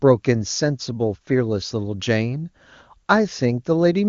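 Speech, with no technical faults heard anywhere.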